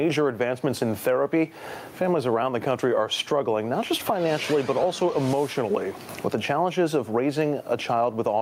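Gain pumping runs through the whole clip, with the level being pulled down on each loud sound and rising again afterwards, a swing of around 20 dB. The likely cause is input gain set far too high for the microphone, so that a fast limiter or compressor keeps clamping down on every loud moment and then letting go. The result is audible breathing of the level, with loud and soft passages pressed closer together and the sound squashed.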